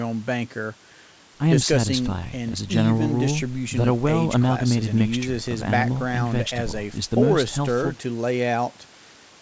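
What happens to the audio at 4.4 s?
Nothing goes wrong at 4.4 s: the speech carries on intact through that moment, with only the normal narrowed top end of a G.722 call path, which leaves nothing above 8 kHz.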